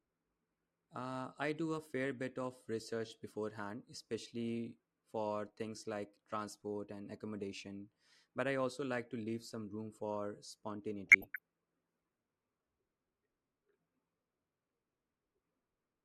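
Speech, where weak DAB reception let bit errors slip past error correction into the MP2 audio data, corrupting samples and scale factors so single sub-bands jump in level. The result is DAB burbling: a brief burst at 7.41 s, then a longer patch from 11.07 to 11.38 s.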